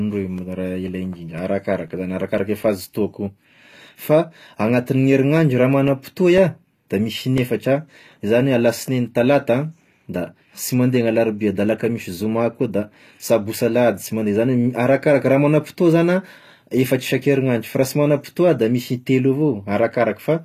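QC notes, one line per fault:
Throughout: HE-AAC compression, likely the cause of the plainly audible codec damage in this speech. Nothing remains above 14.9 kHz, and the upper treble is rebuilt from copied lower bands, so s sounds turn gritty and lispy, which fits a low bitrate around 24 kbps.
0.38 to 7.38 s: Periodic USB or driver dropouts. Around fifteen evenly spaced ticks occur every 0.5 s, each a gap of about 2 ms replaced by silence. The fixed spacing points to a background task stalling the audio path at a regular interval.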